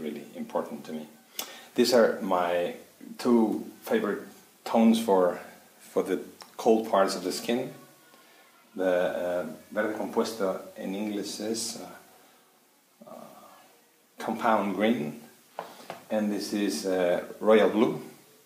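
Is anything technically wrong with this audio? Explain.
No, there is nothing technically wrong with it.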